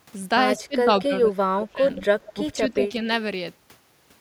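Echo leak at 0.57–0.64 s: a faint copy of the speech arriving 174 ms late, about 25 dB down, likely from a far-end loudspeaker whose echo canceller let some pickup through. Speech suppressed in double talk follows from 0.58 to 1.85 s: during the overlap the canceller, likely unable to separate talker from echo, pulls the speech down in pieces, up to about 25 dB, for roughly a second. Echo leak returns at 2.01–2.05 s and 2.24–2.34 s, with the same 174 ms delay, the second about 20 dB down. Speech suppressed in double talk recurs at 2.35–3.02 s as a shallow dip of about 5 dB over roughly 0.3 s. A final echo leak at 2.84–2.88 s sits about 20 dB down.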